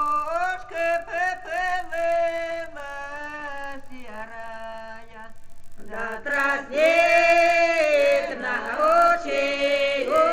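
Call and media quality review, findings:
Steady 50 Hz buzz riding on the signal across the whole clip, gone in pauses. Resampler restarted on every block, 16 kHz to 48 kHz: each 20 ms block converted in isolation, leaving a small edge error fifty times a second.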